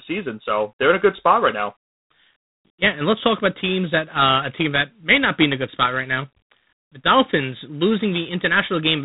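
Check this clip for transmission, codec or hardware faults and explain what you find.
One codec fault runs through the whole clip. It is G.726 ADPCM coding. This codec sends only the difference between each sample and an adaptive prediction, using very few bits per sample. Here the damage is plainly audible, which fits the 24 kbit/s rate. With so few bits, the quantisation error becomes a harsh, rasping hiss. It rises and falls with the speech level. Nothing passes above 3.8 kHz, so the speech sounds narrow and telephone-like.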